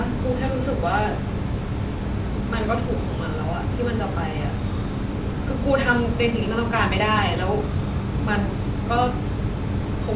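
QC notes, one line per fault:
No faults found; the call path comes through as expected, with the speech band-limited to nothing above 4 kHz, which fits G.711 mu-law telephone coding.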